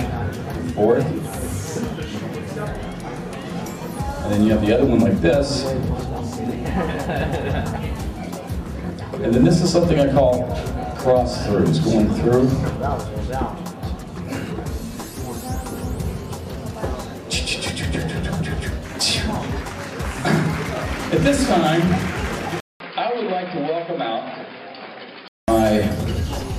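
The input was likely switched to a poorer device between 22.60 s and 25.48 s. After a 200 ms silence at the switch, the sound turns dull, with nothing above 5.1 kHz, drops roughly 10 dB, and picks up a faint new background noise.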